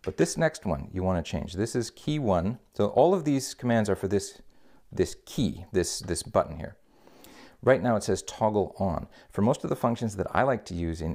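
Nothing in this one trips the ear: no glitches, dropouts or other technical problems turn up anywhere along the way.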